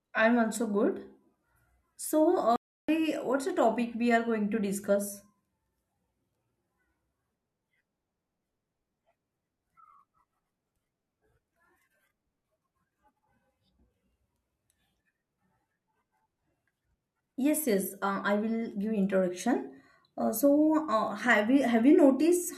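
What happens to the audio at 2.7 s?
The speech halts abruptly at 2.56 s and stays silent until 2.89 s, a playback stall of about 325 ms, likely from the player running out of data. The speech then resumes after the gap.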